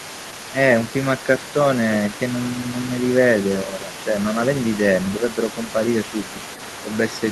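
A speech recording with a faint second voice running underneath the talker for the full length, roughly 15 dB below the main speech. This is other side's voice leaking through, likely residual loudspeaker echo that the echo canceller failed to remove from the microphone signal. The talker's level also dips by a few decibels from 3.64 to 3.89 s and again from 5.66 to 5.77 s, while the leaked voice is active. These brief drops are speech suppressed in double talk, likely the canceller attenuating everything when both sides overlapped.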